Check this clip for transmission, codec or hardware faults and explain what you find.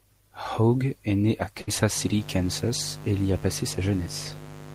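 Two faults show up in this speech clip: a short dropout early on, then a buzz that runs to the end.

From 1.61 to 1.69 s there's a burst of packet loss. A run of packets never arrived in time, so the receiver stretched the last bit of sound for roughly 60 ms, fading it down, then jumped ahead, skipping about 60 ms of speech.

From 1.94 s to the end there's mains buzz at 50 Hz, sitting roughly 15 dB under the speech. Sharp switching spikes, twice per mains cycle, leak into the chain and throw harmonics up into the kilohertz range, giving a steady, raspy drone behind everything.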